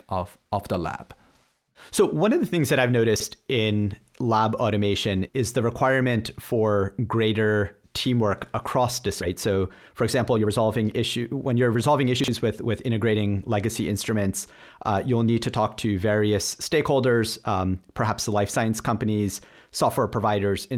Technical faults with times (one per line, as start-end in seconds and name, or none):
3.16-3.24 chunks out of order
9.21 skip ahead
9.49-12.68 jitter buffer speed-up
12.20-12.28 chunks out of order